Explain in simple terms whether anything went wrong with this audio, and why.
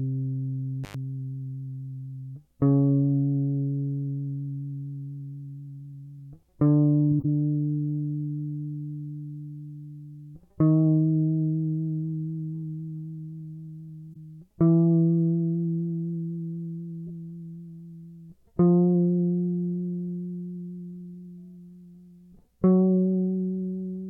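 Right at the start, around 0.84 to 0.94 s, the music drops out for about a tenth of a second with a crackle on either side. That's an intermittent contact: a loose plug or cable briefly lost its connection, then reconnected.

Later there are three short glitches where the music gets a brief chirpy, noisy burst: 7.11 to 7.25 s (the longest and loudest), 14.13 s, and 17.07 s (both short and faint). Each is a corrupt frame decoded, where damaged compressed data was played anyway.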